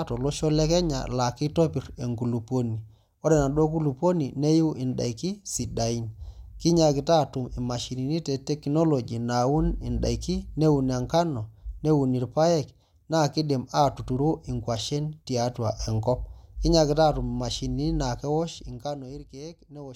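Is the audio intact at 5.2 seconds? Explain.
Yes, the audio is intact at 5.2 seconds, with no fault at that moment.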